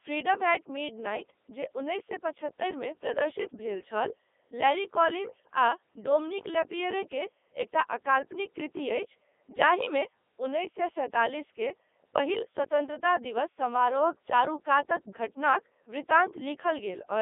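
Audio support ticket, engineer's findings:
Robotic, buzzy speech for the full clip. Probable component: Codec 2 vocoder, with damage consistent with its 3.2 kbit/s mode. Only pitch, voicing, energy and spectral envelope carried; decoder rebuilds speech from sine waves, so the original waveform is lost. Heavy codec damage. Band roughly 250 Hz to 3.6 kHz, nothing above 3.8 kHz.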